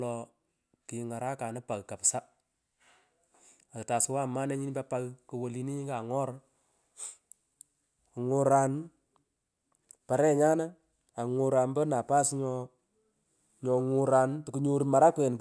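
No technical fault can be heard anywhere in the speech recording, and the signal holds steady throughout with nothing to mark at any point.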